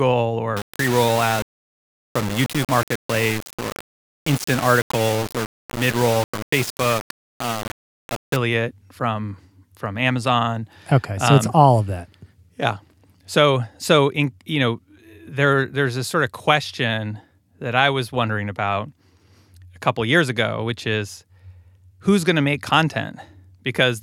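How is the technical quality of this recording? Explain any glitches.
Speech quality breaks down at the start of the recording. From 0.57 to 8.36 s, low bit depth without dither is the likely cause. The signal was rounded to very few levels, consistent with about 4 bits, so the error follows the speech as harsh, grainy distortion roughly 10 dB below the signal itself, and quiet stretches drop out or sputter.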